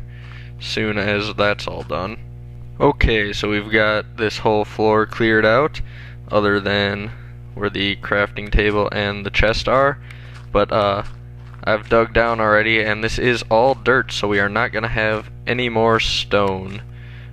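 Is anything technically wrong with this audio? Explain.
Yes, there's mains hum running under the whole clip, a steady 60 Hz tone sitting roughly 20 dB below the sound. That's power-line energy leaking in, likely from a ground loop or a transformer close to the cabling, and it's plainly audible as a constant low drone.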